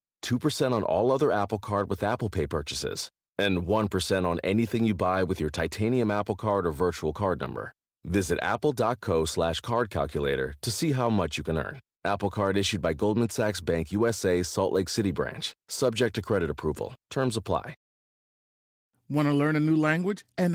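No technical faults turn up in the speech; the Opus voice compression keeps the full audio band and leaves only light coding traces, which fits its hybrid mode at around 24 kbps.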